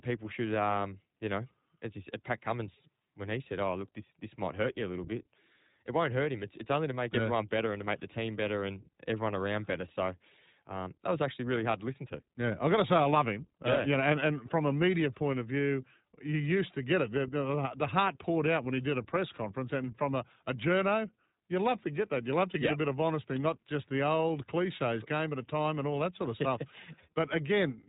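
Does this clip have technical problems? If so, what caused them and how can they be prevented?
Yes. The whole clip carries iLBC codec damage, and it is plainly audible. There is nothing above about 3.8 kHz, so the speech sounds narrowband and muffled. The voice has a rough, slightly synthetic edge. iLBC codes each short frame's excitation on its own, without leaning on earlier frames. The texture points to 20 ms frames, which fits the 15.2 kbps mode. To prevent it, record or transmit with a wideband codec at a higher bitrate.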